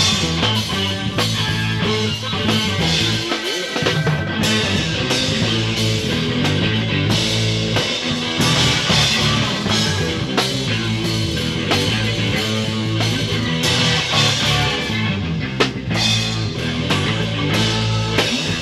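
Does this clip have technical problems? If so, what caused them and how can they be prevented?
No, there are no technical problems to report in this clip. Nothing is audible that points to a fault in capture, processing or playback, so there is nothing to trace or prevent.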